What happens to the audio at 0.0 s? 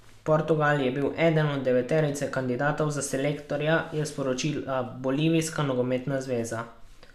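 Nothing goes wrong at 0.0 s; the speech there is intact, with no dropout, click or distortion.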